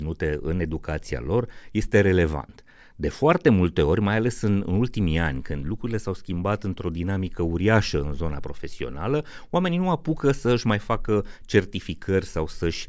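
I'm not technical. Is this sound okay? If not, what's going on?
Yes, nothing wrong can be heard in this speech recording, so there is nothing to fix.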